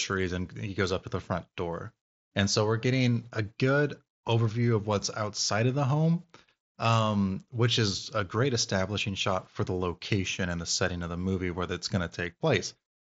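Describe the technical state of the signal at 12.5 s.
At 12.5 s the speech is intact, with no dropout, click or distortion, and it carries the wideband Bluetooth headset band limit, with nothing above about 7.7 kHz.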